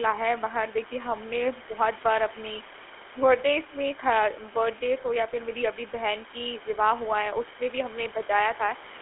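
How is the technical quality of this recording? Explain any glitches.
The recording carries plainly audible codec damage from start to finish. Room noise sits about 20 dB below the speech.

GSM full-rate codec, throughout the clip: the speech is rebuilt from a vocal-tract model driven by sparse, evenly spaced pulses, and confined to a band from 300 Hz to 3.4 kHz. That coarse excitation leaves a buzzy, gravelly roughness that fits a 13 kbps GSM full-rate link.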